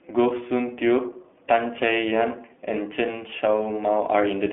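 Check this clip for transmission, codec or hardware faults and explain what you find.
One fault affects the whole clip: the speech has passed through the iLBC codec. Throughout, each 20 ms frame is coded independently at a rate that fits 15.2 kbps, giving a thin 250 Hz to 3.5 kHz band, nothing above 3.8 kHz, and a plainly rough, synthetic texture.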